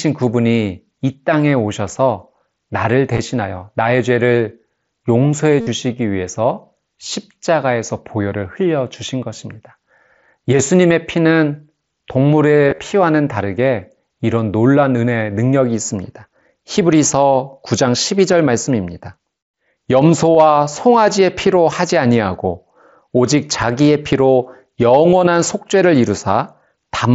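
Concealed Bluetooth headset packet loss strikes at 3.13–3.19 s, 5.61–5.67 s and 12.68–12.79 s. Missing packets are filled by repeating the last few milliseconds of waveform, so rather than silent dropouts each run becomes a brief buzzy held tone, warbling as speech returns.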